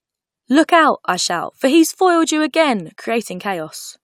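No technical faults can be heard anywhere in this speech.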